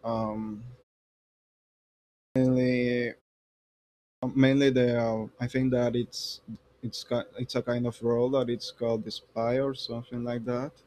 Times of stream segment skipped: none

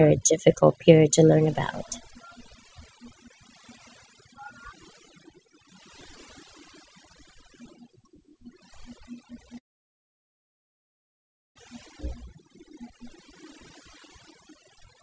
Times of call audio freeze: 9.58-11.57

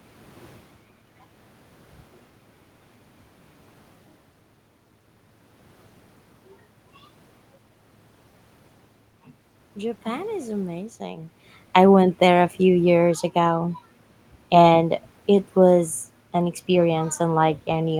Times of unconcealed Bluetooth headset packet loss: none

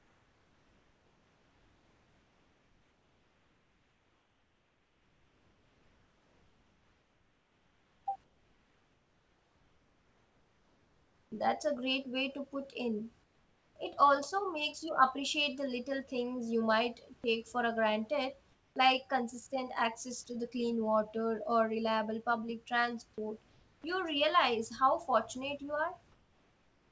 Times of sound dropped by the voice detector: 20.24

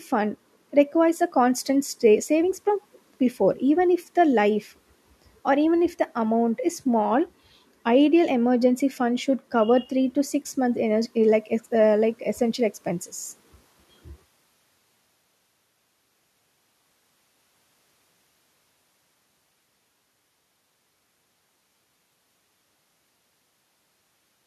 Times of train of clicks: none

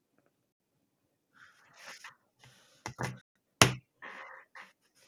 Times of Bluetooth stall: 0.52-0.60, 3.21-3.35

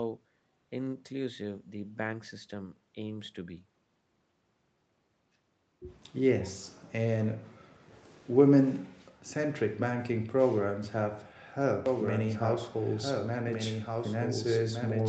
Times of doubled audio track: 11.86-15.09

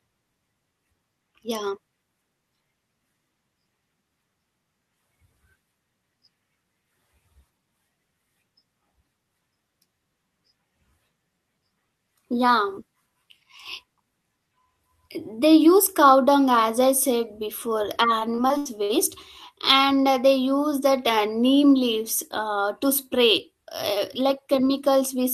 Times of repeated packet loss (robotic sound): 18.19-18.91

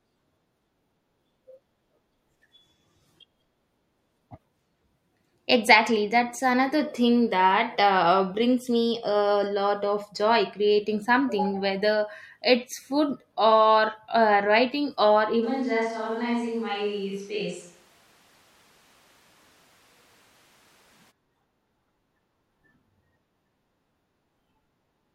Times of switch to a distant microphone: 15.44-21.10

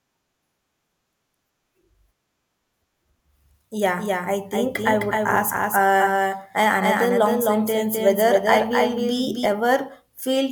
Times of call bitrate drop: none

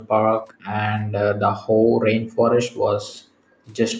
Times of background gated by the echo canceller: 0.00-0.13, 0.53-0.77, 1.05-2.51, 3.21-3.64

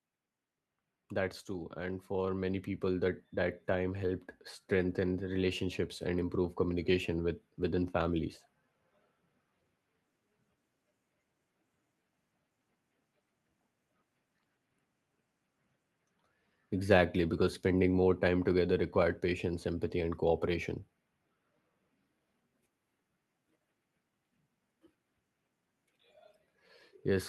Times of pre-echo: none

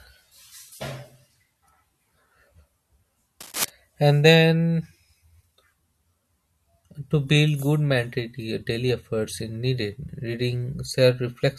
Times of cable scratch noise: 3.40-3.70

